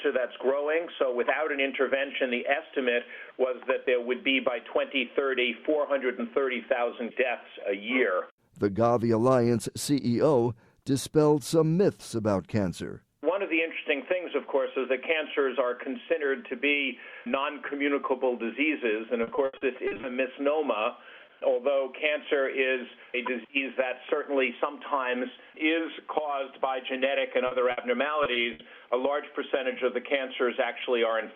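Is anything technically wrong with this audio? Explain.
Yes. There are three kinds of packet loss.

Repeated packet loss (robotic sound) occurs from 19.23 to 20.05 s, and again from 28.23 to 28.61 s. Audio kept going missing in quick succession, and each hole was patched from the last sound. About a third of each stretch is patched. The longest hole is 80 ms in the first stretch and 60 ms in the second. The result is choppy and robotic, with pieces missing.

A short concealed packet loss at 27.47 s lasts about 40 ms. The hole was filled by continuing the preceding sound. It is heard as a brief smear or wobble.

A burst of packet loss follows at 27.71 to 27.79 s. About 60 ms never arrived. The receiver held the last sound and faded it, giving a short buzz or hiss before the audio jumps ahead.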